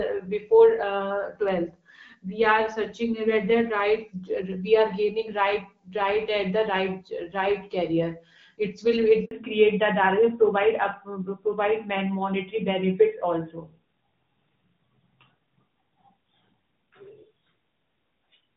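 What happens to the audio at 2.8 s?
Nothing goes wrong at 2.8 s: the speech carries on intact through that moment, with only the light coding of the AMR wideband (HD Voice) codec at 12.65 kbit/s, which keeps it clear.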